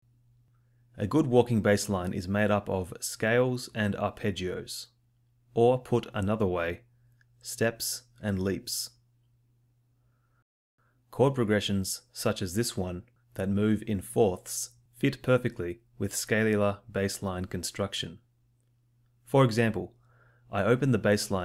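No technical faults are audible.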